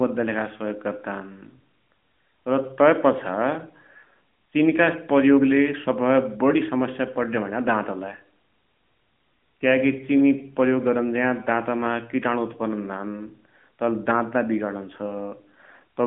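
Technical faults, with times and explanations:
No technical faults are audible in the recording. It arrives over an AMR narrowband mobile codec path, with the light codec damage and the roughly 150 Hz to 3.4 kHz line band that fit its 12.2 kbps mode, and nothing above 3.8 kHz.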